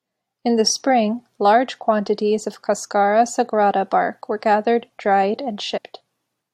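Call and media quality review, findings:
Compressed frames skipped, 2.84–2.86 s, after "spring large quantities of": roughly 20 ms of audio missing. Whole frames were not played, so the audio jumps ahead at the join.

Same fault, 5.76–5.78 s, after "bark were gathered dried": a larger jump, around 70 ms lost. The spectrogram shows a vertical seam where harmonics jump.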